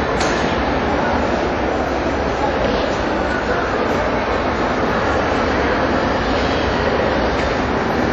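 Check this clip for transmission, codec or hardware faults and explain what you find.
One codec fault runs through the whole clip.

WMA compression, throughout: the audio has a ringing, washy quality with hiss that swells and fades with the signal, and nothing above 13 kHz. This is likely a transform codec with long blocks smearing quantisation noise over tens of milliseconds and zeroing weak components, which fits a low bitrate around 48 kbps.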